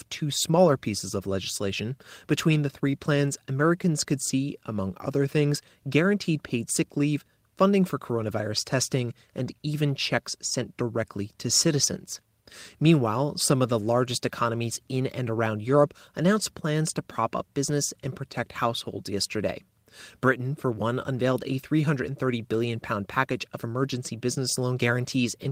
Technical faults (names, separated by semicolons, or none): lost packet rebuilt from error correction